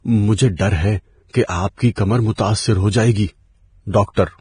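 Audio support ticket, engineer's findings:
Hissy, grainy speech throughout, 0 to 4.4 s. Consonants smeared, treble replaced by noise-like fizz, nothing above 9.7 kHz. Likely cause: heavy Vorbis compression, coarse residue quantisation swapping fine treble detail for equal-energy noise, lowered cut-off. Damage level fits roughly 24 kbps.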